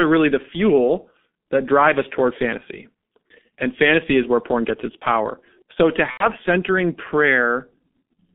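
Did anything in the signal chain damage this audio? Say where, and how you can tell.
Yes. G.723.1 codec damage runs throughout, at the codec stage. The band stops near 150 Hz and 3.5 kHz, and the sound is heavily muffled and hoarse with smeared consonants, which points to a coarse low-rate coder around 6.3 kbit/s whose slow model updates cannot track fast changes.

VoIP packet loss concealed by the speech codec occurs at the network stage from 6.11 to 6.32 s. The speech turns into a stretched, fading sound where the decoder extrapolated its last pitch and filter across a 90 ms gap. That gap fits about three lost 30 ms frames, and the sound stays weak for a while after packets resume.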